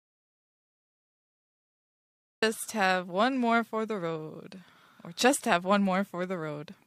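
The input feeding the recorder was evidently lost from the very first sample, most likely through a disconnected device, a failed link or a stray mute, while the recording kept writing silence. The result is an audio dropout to silence already under way when the speech clip opens: from 0 to 2.42 s there is dead silence with no room tone at all, and the speech then cuts in abruptly mid-flow. Whatever was said during that gap is lost.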